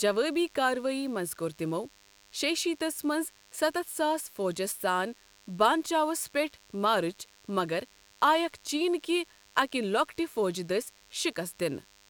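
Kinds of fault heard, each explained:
DECT cordless phone buzz: radio bursts every 10 ms, rectified by the audio circuit, give a thin, harmonic-rich 100 Hz buzz sitting about 30 dB below the speech throughout.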